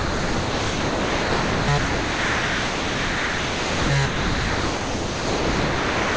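Sound dropped by the voice detector, from 0.00 to 1.68 s, 1.78 to 3.90 s and 4.06 to 6.17 s: the sound gives way to steady comfort noise, likely because the sender's detector treated it as background and stopped sending. Through the call codec, nothing is heard above 8 kHz.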